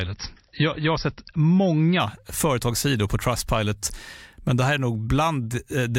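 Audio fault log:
0.0–2.0 s, adaptive stream starting at a low bitrate: nothing above 5.8 kHz and stronger MP3 artefacts at 28.9 kbit/s, then an abrupt, gapless jump to MP3 at 128 kbit/s rather than a gradual recovery.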